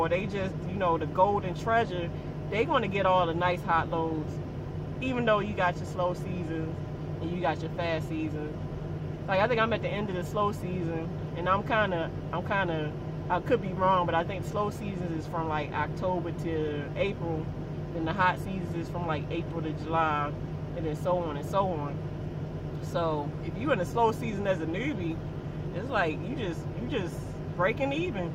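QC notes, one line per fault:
No faults found on this pass; nothing to log.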